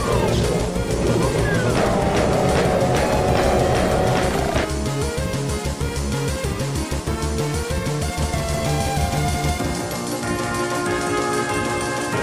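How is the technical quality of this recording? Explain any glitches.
The recording has one clear glitch, a doubled audio track. It begins abruptly at 8.21 s and runs to the end. From there, a second full-band copy of the sound trails the original by around 200 ms. It sits a few decibels lower, about 5 dB down. It has no decay and no room colour. The likely cause is the audio being captured twice, once through a slower path. The result is a hard, slapback-like echo.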